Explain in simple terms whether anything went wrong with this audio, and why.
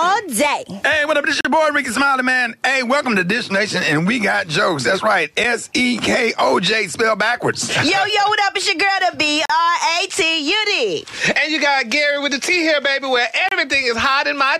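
The stream arrives in 4-second pieces, and their timing doesn't line up perfectly, leaving a gap between stream segments that the player fills with silence. You hear brief, sharp dropouts at 1.41–1.45 s, 5.44 s, 9.45–9.50 s and 13.49–13.52 s, with nothing actually missing from the sound.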